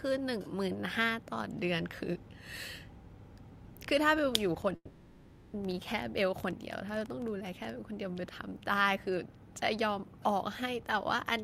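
From 4.62 s to 7.71 s, a train of clicks sits over the speech. Something in the chain is injecting short pulses, likely interference from nearby equipment or a faulty connection or power supply. The pulses arrive at about 11.7 per second but at an uneven pace, roughly forty in all, with peaks of about 5 dB above the speech. They are heard as a ragged ticking or popping that carries on through the pauses.

Starting inside that stretch, at 4.75 s, a long network dropout cuts the audio until 5.55 s. The stream most likely stopped arriving at the receiver for about 780 ms, and none of that audio was ever played. To cover the gap, the receiver stretches the last bit of speech into a buzzy, hissy tail that fades away, followed by about 40 ms of near silence. The speech then resumes further on, with the lost section simply missing.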